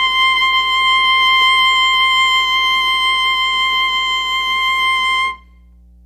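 Mains hum runs from start to finish under the music: a steady low tone at 60 Hz with some low harmonics, sitting roughly 30 dB below the signal. A ground loop or nearby transformer has let the power line leak into the audio path.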